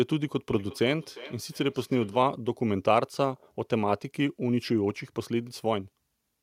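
Speech with feedback echo between two devices from 0.49 to 2.3 s: each word returns roughly every 400 ms, peaking about 18 dB below the speech, as fainter, thinner copies spaced evenly after each word's shape on a spectrogram.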